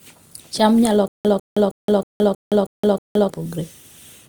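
Speech, with a stutter with silent gaps from 1.08 to 3.30 s: one 148 ms fragment repeats seven times, each followed by 169 ms of digital silence, every 317 ms. Identical repeats at a fixed pace, unlike random dropouts, point to a stalled stream likely replaying its last fragment.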